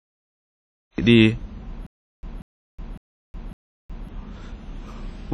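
This speech clip was started late by the recorder or stream, a cut-off start: the first 0.98 s are digital silence, and the speech enters abruptly at 0.98 s in the middle of a sound, with no natural attack or fade-in. Throughout, a transform encoder at a low bitrate, likely WMA compression consistent with about 32 kbps, has quantised the signal heavily. It has zeroed weak spectral detail and removed everything above 12.1 kHz, leaving a ringing, washy tone with hiss that swells and recedes with the speech. From 1.87 s to 4.09 s the player appears to stall and retry, producing a stutter with silent gaps: a 189 ms fragment is replayed four times, each followed by 366 ms of digital silence, for an even 555 ms cycle. The speech that should have filled that stretch is lost.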